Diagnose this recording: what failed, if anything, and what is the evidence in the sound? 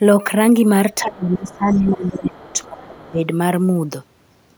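Speech suppressed in double talk, a call-processing fault: between 1.01 and 3.25 s the speech repeatedly sinks, by up to around 20 dB and for about two seconds in total. The likely cause is an echo canceller ducking the near talker while the far side spoke. The dips are uneven, not the clean silence of a network dropout.

The other side's voice is leaking through, also in call processing: faint second-voice fragments at 1.49–1.57, 1.73–1.89, 2.05–2.09, 2.51–2.82 and 3.07–3.11 s, some 20 to 35 dB under the speech. This is likely residual loudspeaker echo, which tracks a separate talker rather than smearing the main voice as room reverberation would.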